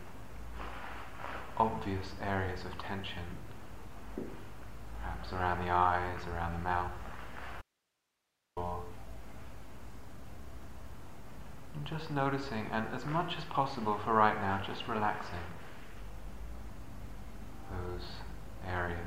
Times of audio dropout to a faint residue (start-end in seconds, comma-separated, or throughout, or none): 7.62-8.57